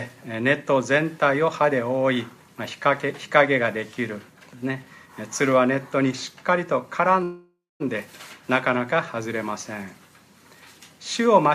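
At 7.23 s the sound stops moving forward and turns into a fading buzz that sinks into silence for about the last 230 ms. At 7.82 s it resumes exactly where it stopped, about 0.57 s late. This call audio freeze was likely caused by delayed packets draining the jitter buffer.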